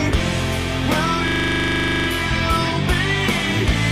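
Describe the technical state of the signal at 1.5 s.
At 1.5 s the signal is caught in a system hang loop running from 1.28 to 2.08 s. The computer or driver stalled while the sound hardware kept replaying its ring buffer. One 40 ms slice of audio repeats exactly, 20 times, which points to a buffer of that length. The repeats arrive at 25 Hz and make a rapid, rattling buzz. Essentially no audio is lost around the loop.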